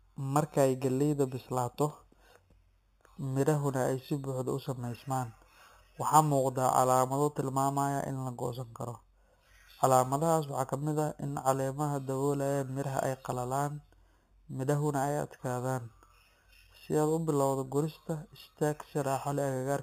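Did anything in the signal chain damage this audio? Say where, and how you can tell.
Yes. The damage happened in the sample-rate conversion stage, and it is present for the whole clip as imaging from sample-and-hold upsampling. Above the speech there is a metallic fizz, about 18 dB below the signal, sitting between 4 and 8 kHz. It gets louder and quieter with the speech and moves against its pitch. That band fits narrowband audio at 8 kHz raised to 44.1 kHz by repeating samples without a smoothing filter, which leaves mirrored copies of the spectrum.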